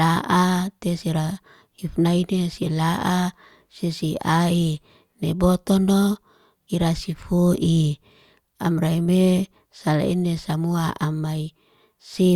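No technical faults can be heard anywhere in the recording; the signal stays steady and intact throughout.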